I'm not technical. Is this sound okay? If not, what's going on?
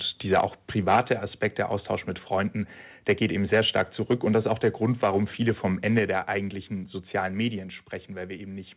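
No. The microphone's input was most likely set too high, so the loudest moments tried to go past the maximum level the recording equipment can handle. This is microphone overload. The tops of those peaks get chopped flat, which adds a harsh, crackly, buzzy roughness to the voice. You can hear it at 0.32 to 0.45, 0.89 to 1.13, 3.09 to 3.26, 3.53 to 3.82, 4.11 to 5.18, 5.47 to 5.50 and 5.97 to 5.99 seconds.

The call software noticed the microphone was too loud and turned its volume down in one sudden step each time, which was likely a reaction to that distortion. This is the microphone volume stepped down. The voice and the background noise both get abruptly quieter, like someone nudging a volume knob. It happens at 0.96, 5.99 and 7.59 seconds, and the first two come right in the middle of or just after a distorted stretch. The whole recording also has the narrow, slightly muffled quality of an ordinary phone call.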